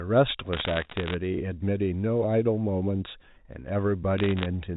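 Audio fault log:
0.53–1.14 s: bit errors on a digital phone line. Flipped bits, roughly one in a hundred and fifty, each corrupt a single G.711 sample and produce crackle over the speech. The waveform shows isolated one-sample spikes, and the spectrogram shows thin vertical streaks reaching the 4 kHz telephone ceiling.
4.18–4.46 s: bit errors on a digital phone line. A sparser run at a lower error rate, heard as scattered sharp ticks wherever a high bit or the sign of a loud sample was hit. These appear as lone waveform spikes and vertical lines on the spectrogram.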